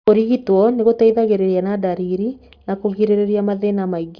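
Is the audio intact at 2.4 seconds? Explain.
No, 2.4 s sits inside aliasing that runs through the whole clip. The sound points to a drop from 48 kHz to 11 kHz with no filter first, so everything above 5.5 kHz folds back as false tones, faint, but leaving sibilants gritty and metallic.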